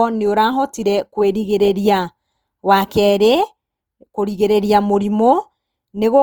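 A speech recording whose whole length carries a plainly audible grainy, rough texture, with tonal parts turning noisy and gritty rather than swirling or hollow, while the top end still reaches to about 20.2 kHz. This is likely Opus compression in its music-style CELT mode at a low rate, consistent with roughly 24 kbps, where starved bands are filled with folded or noise content instead of being left empty.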